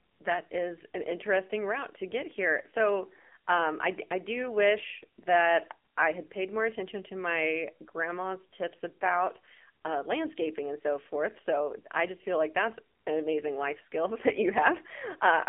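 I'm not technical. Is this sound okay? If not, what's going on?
No, it isn't. From start to finish this speech has gone through the AMR narrowband mobile codec, the squeeze old mobile phone networks use. Everything above about 3.4 kHz and below about 250 Hz is gone, so it sounds thin and boxy. The codec rebuilds the voice from a rough model of the throat instead of sending the real sound, and here it's working on a tight budget, so you can plainly hear a buzzy, synthetic edge.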